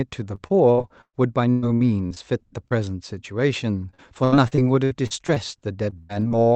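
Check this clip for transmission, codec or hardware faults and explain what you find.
The speech has two packet-loss faults from the call path, heard through Opus coding whose audio band stops near 8 kHz.

Repeated packet loss (robotic sound) occurs from 0.35 to 1.15 s, 1.51 to 2.18 s, 3.91 to 5.38 s and 5.90 to 6.33 s. Holes recur in quick succession, the longest about 116 ms. Each is patched by extending the preceding sound, covering 22 to 41 percent of each stretch, so the speech turns choppy, with pieces missing.

Short concealed packet loss appears once, at 2.68 to 2.72 s. About 20 ms of audio failed to arrive, and the decoder synthesised roughly 24 ms from the preceding sound before blending back into the received signal. It is heard as a brief smear or wobble in the speech.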